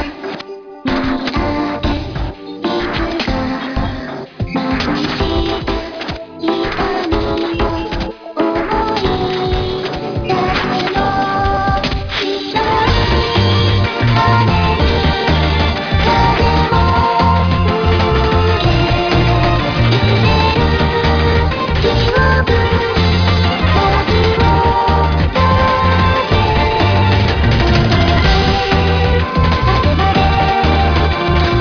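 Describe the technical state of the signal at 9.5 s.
At 9.5 s the signal carries aliasing, present across the whole clip. The audio looks to have been taken down from a 44.1 kHz rate to about 11 kHz without an anti-aliasing filter, so everything above the 5.5 kHz folding point mirrors back below it as false, unrelated tones, roughly 15 dB under the wanted sound. Bright, hissy content turns gritty and metallic, and the spectrum runs hard right up to 5.5 kHz.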